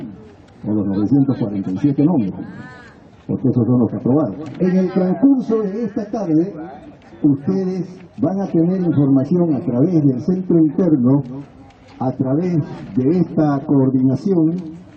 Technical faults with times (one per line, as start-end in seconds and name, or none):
none